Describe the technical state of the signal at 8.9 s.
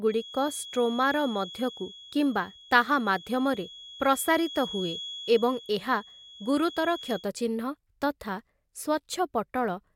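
At 8.9 s the speech signal is intact, with no audible fault at that moment.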